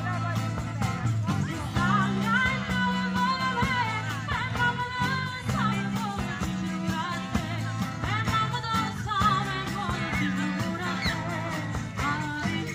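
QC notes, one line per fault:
No faults found. Nothing in the audio calls for a timed entry.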